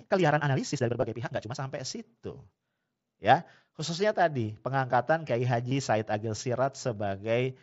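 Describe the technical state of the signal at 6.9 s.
At 6.9 s the speech is intact, with no fault present, only the light graininess of the mSBC Bluetooth headset codec that carries it throughout.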